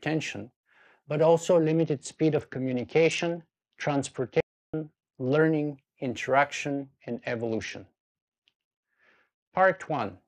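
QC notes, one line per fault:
1.67–5.41 s and 6.72–10.01 s, Bluetooth SBC bit pool drop: in both stretches the treble goes dull and a gritty, grainy noise rides on the sound, then clears when quality recovers. The encoder is starving the upper sub-bands and coarsely quantising the rest, which fits the bit pool falling from 28 to about 8, near 72 kbps. Unlike a dropout, the bit pool drop itself does not stop the sound. Unlike a plain low-pass filter, it adds grit as well as dulling the treble, and the effect switches on and off with the link rather than lasting the whole clip.
4.40–4.74 s, audio dropout to silence: the sound cuts off abruptly for about 330 ms and resumes mid-flow. The gap is silent with no room tone or hiss at all, so whatever played there is simply gone, likely from the input link failing while the recorder kept writing silence. This is different from a level dip or a gate closing, which would leave some residual noise. 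It falls inside the first degraded stretch.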